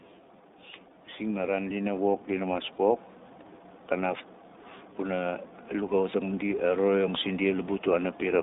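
Speech heard throughout the iLBC codec, passed only between about 250 Hz and 3.7 kHz with a slightly rough, synthetic edge. Unlike a plain band-limited phone line, the roughness comes from each 20 ms frame being coded independently, which fits iLBC's 15.2 kbps mode. From 1.18 to 3.09 s the automatic gain rises by about 4 dB. It is a gain ramp rather than the talker getting louder, because the background noise swells by the same amount alongside the speech over those two seconds.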